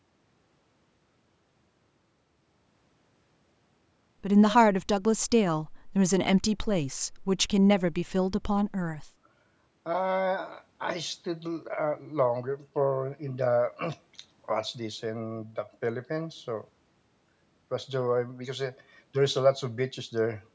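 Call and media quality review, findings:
Nothing stood out on listening; the speech comes through the call's microphone processing as expected, with the top end stopping around 8 kHz and the lowest bass trimmed in the usual way.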